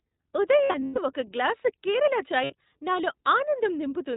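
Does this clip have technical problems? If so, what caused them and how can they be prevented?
Yes. The whole speech clip goes through the iLBC codec. It's narrowband with nothing above 4 kHz, and sounds slightly rough and synthetic, consistent with the 20 ms mode. Prevent it by using a wideband codec.

There are also lost iLBC frames from 0.64 to 0.99 s, right before "ఒక గ్లాసు కేరళ", and from 2.44 to 2.53 s, right after it. The decoder fills each gap with a buzzy, held vowel, then recovers almost at once. A steadier network path or forward error correction would prevent it.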